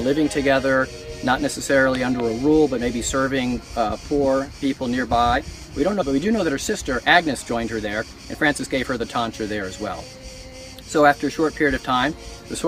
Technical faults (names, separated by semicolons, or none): skip ahead; jitter buffer speed-up